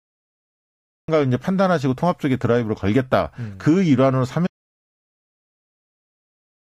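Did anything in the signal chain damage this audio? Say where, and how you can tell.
Yes. The speech bursts in at 1.08 s after digital silence, already mid-sound with no attack: a cut-off start, meaning the recording began late.

From 4.47 s to the end the speech vanishes into total silence without room tone, an audio dropout to silence, likely lost input while silence kept being written.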